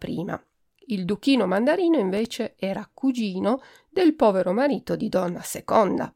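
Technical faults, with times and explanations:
2.17–2.58 s: processor overload crackle, a gritty burst of sub-millisecond silent gaps from repeatedly missed buffer deadlines, clustered together rather than one clean dropout.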